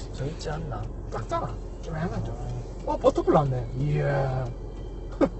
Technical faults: Opus compression

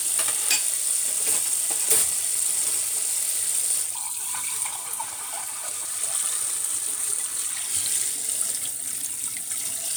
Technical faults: none

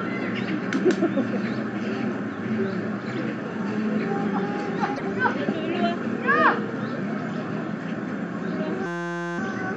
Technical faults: damaged data in a compressed stream; system hang loop

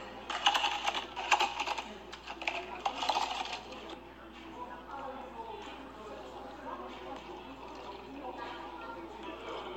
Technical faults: none

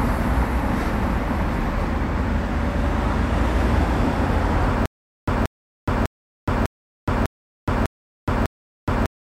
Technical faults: stutter with silent gaps

